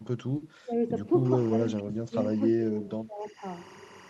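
At 0.37 to 0.42 s, short concealed packet loss: about 40 ms of audio arrived too late, and the decoder extrapolated the preceding sound to bridge the gap, leaving a brief smeared wobble. At 0.64 to 0.73 s the level dips by roughly 20 dB, speech suppressed in double talk: the echo canceller likely mistook simultaneous talk for echo and ducked it. From 1.25 s to the end, timecode bleed: linear timecode, fitting 24 frames per second, leaks in at around 20 dB below the sound, a steady chirping warble alternating near 1 and 2 kHz. At 1.49 to 1.51 s a second concealed packet loss patches roughly 10 ms, a brief smear. The same double-talk suppression returns at 1.70 to 2.16 s, dipping by up to about 25 dB, and at 2.38 to 3.43 s, by about 20 dB. All of this passes through an Opus call path that rolls off the top end around 12 kHz, which fits a bitrate near 32 kbps.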